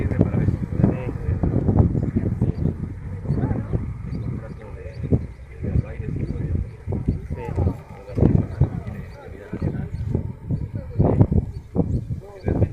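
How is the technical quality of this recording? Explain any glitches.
The recording has one clear glitch, a stretch of degraded encoding. A call bitrate drop runs from 1.6 s to 8.47 s: the connection's bandwidth estimate fell, and the encoder was forced onto a far smaller bit budget. The sound turns coarse and watery, and the top end is cut from about 20 kHz to about 12 kHz. That fits a fall from around 128 kbps to about 21 kbps, bottoming out for roughly 4.6 s before recovering.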